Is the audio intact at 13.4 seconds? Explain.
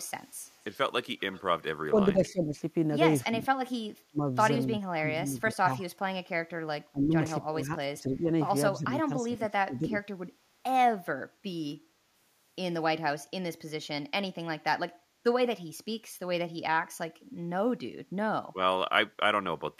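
Yes, the audio is intact at 13.4 seconds, with no fault present at that moment.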